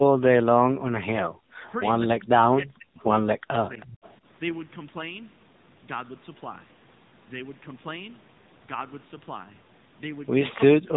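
Speech runs through the AMR narrowband mobile codec for its whole length. Nothing passes above 3.8 kHz. The voice sounds buzzy and synthetic, and the damage is plainly audible. That fits a low AMR-NB bitrate of around 8 kbps. The voice drops out sharply at 0.00 to 0.23 s, 2.54 to 3.06 s, 3.36 to 4.26 s and 10.68 to 10.92 s. It falls nearly to silence each time. The likely cause is speech suppressed in double talk, where the echo canceller turns the talker down while the far side speaks. Inside the third dip, from 3.80 to 4.14 s, a faint second copy of the voice trails 321 ms behind. It sits well below the main speech. This is likely echo leak, with loudspeaker sound slipping past the canceller and returning.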